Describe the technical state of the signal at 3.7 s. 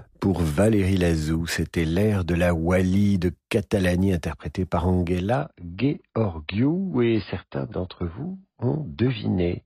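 At 3.7 s the speech signal is intact, with no audible dropout, distortion, glitch or other fault at that point.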